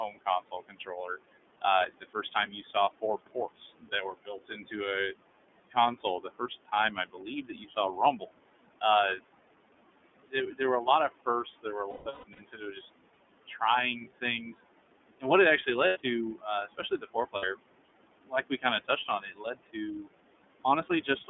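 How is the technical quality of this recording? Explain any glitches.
The quality is poor. The speech passes through heavy noise suppression and a narrowband codec. Several stretches are swallowed or patched over.

Noise suppressor artifacts run through the whole clip. The suppressor turns down bands it treats as steady noise, here by about 21 dB. The room noise, about 14 dB below the speech, sinks between phrases and rises under them.

The iLBC codec is plainly audible throughout. Only about 200 Hz to 3.5 kHz gets through, so the speech sounds boxy and muffled. The rough, slightly synthetic edge fits iLBC's 13.33 kbps mode with 30 ms frames.

Speech cut by the noise suppressor happens at 0.08–4.75 s, 5.71–9.28 s, 10.24–13.62 s, 14.21–14.57 s, 15.2–17.61 s, 18.25–20.09 s and 20.64–21.30 s. The suppressor mistook quiet speech for noise. Dips reach about 22 dB. Soft consonants and word endings sound swallowed.

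Lost iLBC frames occur at 11.90–12.40 s, 15.87–15.97 s and 17.36–17.44 s. Packets went missing. The decoder repeated the last pitch cycle mixed with noise. The first gap loses about a third of a second in bursts. It sounds like a held, buzzy vowel. The speech recovers at once.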